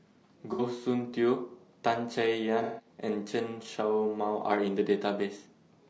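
Across the whole speech clip the sound is rough and grainy, with noise filling the gaps between harmonics and a thin, synthetic-sounding top band. This is likely low-delay AAC compression at a bitrate that points to around 32 kbps: its short frames resolve pitch poorly and run out of bits.

At 0.53 to 0.62 s a brief smeared, noisy patch interrupts the speech, and from 2.63 to 2.89 s a longer one sounds phasey and loses some energy. Both are AAC frame loss with concealment: the decoder rebuilt the missing stretches from the last good spectrum.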